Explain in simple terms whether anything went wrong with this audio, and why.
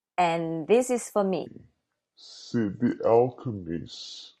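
Yes. From 1.46 s to the end, a section at the wrong speed plays, likely because the player or editor ran that part on the wrong clock, at about 0.61 times normal speed. The speech turns slow and drawn out, and pitch drops together with it, roughly ten semitones deeper.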